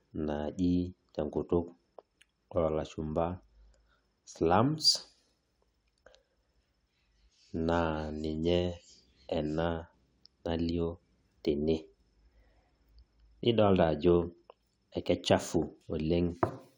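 Speech, with nothing technically wrong to report at any point.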